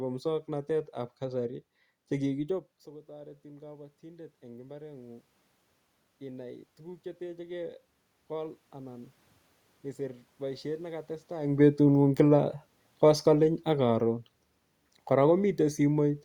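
Automatic gain rising occurs in this speech recording from 3.06 to 5.29 s and again from 6.18 to 9.07 s. After the talker's shift around 2.5 s, the input falls by about 18 dB, and each time the gain control slowly adds about 5 dB, so voice and room noise swell up together over two to three seconds. Automatic gain falling follows from 11.47 to 14.21 s, just after "boisiet ne katestai", as the talker shifts again near 11.5 s. The input arrives too loud, or with background noise too strong for the starting gain, and the control then eases its gain down by about 4 dB, pulling voice and background down in unison.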